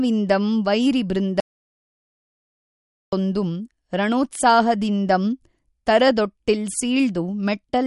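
Throughout the speech, MP3 compression is plainly audible: nothing above 11.2 kHz, watery swirling on sibilants and smeared attacks, likely from a low bitrate around 48 kbps, not from a simple low-pass filter.

From 1.40 to 3.13 s, an audio dropout to silence removes about 1.7 s. The gap is silent with no room tone, unlike a fade or a noise gate, likely from lost input.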